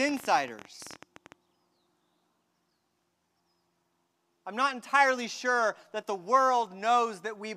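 A rapid, uneven ticking rides over the speech from 0.09 to 1.33 s: a train of clicks, roughly twenty pulses at about 18.7 per second, each about as loud as the speech itself. Likely cause: electrical interference or a faulty connection or power supply injecting repeated pulses.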